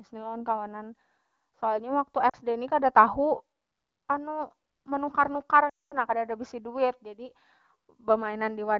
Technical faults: lost AMR speech frames

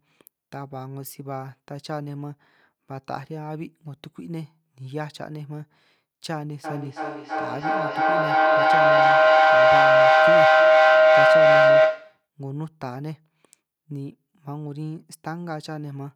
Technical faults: feedback howl

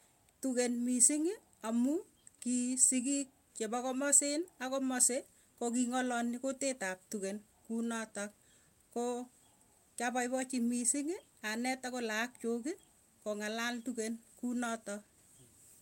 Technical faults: none

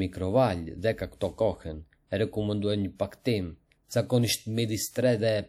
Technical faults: pre-echo

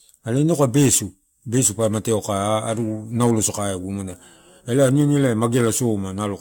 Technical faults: generation loss

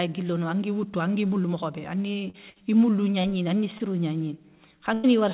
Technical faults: short concealed packet loss; burst of packet loss

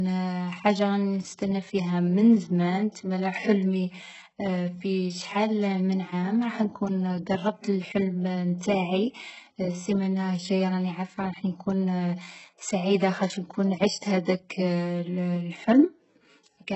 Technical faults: HE-AAC compression

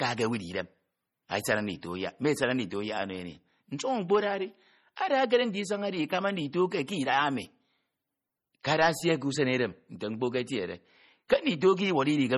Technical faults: MP3 compression

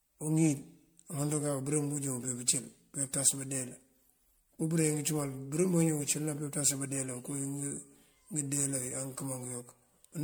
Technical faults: generation loss

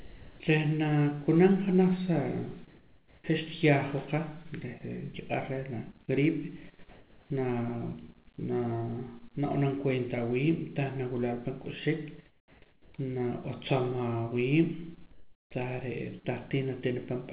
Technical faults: sound dropped by the voice detector; comfort noise in place of the background

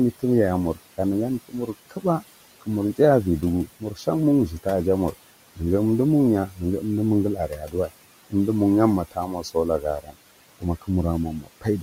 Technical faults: noise suppressor artifacts; speech cut by the noise suppressor

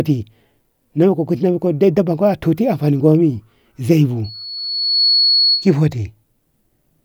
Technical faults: loudspeaker feedback squeal

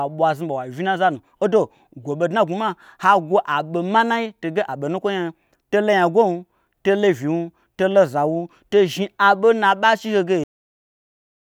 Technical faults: cut-off end

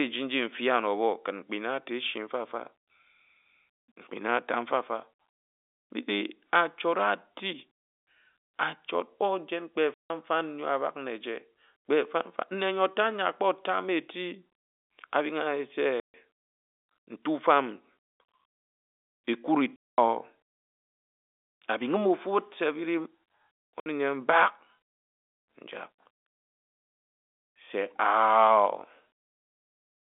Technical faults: packet loss filled with silence

